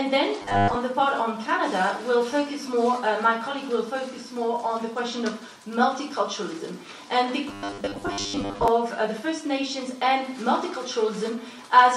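From 0.42 to 0.77 s and again from 7.49 to 8.68 s there's robotic sound from repeated short buffers, a stiff metallic buzz at 100 Hz. Audio was likely arriving too late, so about 70% of the time a 10 ms chunk got replayed.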